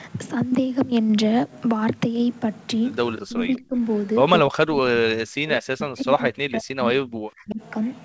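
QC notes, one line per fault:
3.17–3.21 s, echo leak: a faint copy of the speech returns about 198 ms late, roughly 20 dB down, likely an echo canceller letting loudspeaker pickup through.
3.22–3.73 s and 4.43–7.61 s, speech suppressed in double talk: the talker dips by up to around 30 dB, then around 40 dB, in pieces, likely because the echo canceller mistook it for echo while both sides spoke.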